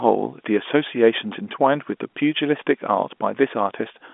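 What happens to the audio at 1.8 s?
Nothing goes wrong at 1.8 s: the speech carries on intact through that moment, heard through the narrow G.711 telephone band, with nothing above about 3.7 kHz.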